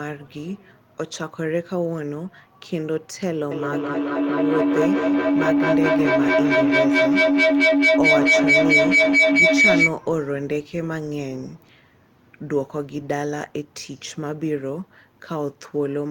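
Feedback howl from 3.51 to 10.03 s in this speech clip: a microphone-to-loudspeaker loop gains level each pass, building a roughly 2 kHz tone pulsing about every 200 ms, peaking about 9 dB above the voice.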